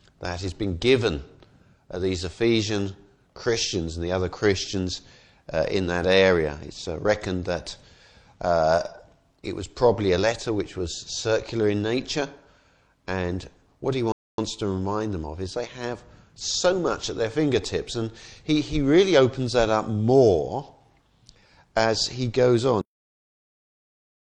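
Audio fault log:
14.12–14.38 s, rebuffering stall: the audio halts into silence for about 260 ms, then picks up at exactly the point where it stopped. The player ran dry of downloaded data and waited. Unlike a dropout, nothing is missing afterwards; the gap only adds time.
22.81 s, cut-off end: the sound stops mid-event and falls straight to digital silence for the rest of the clip, with no decay or tail. The final buffers were never written or played. A natural ending or fade-out would taper away, but this one simply cuts off.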